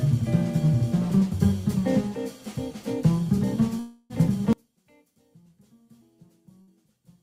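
Between 3.79 and 4.13 s there is a long network dropout, likely caused by the connection stalling. About 0.3 s of audio never arrives, and the gap is filled by a repeated, fading buzz or hiss rather than silence. On a spectrogram this shows as smeared, stretched sound decaying into a blur before the sound resumes further on, with that stretch missing. From 4.53 s to the end, one channel is likely inverted. Heard in mono, the shared centre content cancels and the level drops by about 33 dB, leaving only a faint residue of the channel difference. A mono-summed waveform collapses to a thin trace there, and the spectrogram goes pale. Inside that section, from 6.62 to 6.70 s, a burst of packet loss removes about 60 ms. The receiver stretches the last sound into a short held buzz or fading hiss that is turned down as the gap goes on. It appears as a brief band of copied, flattened texture before the audio jumps ahead.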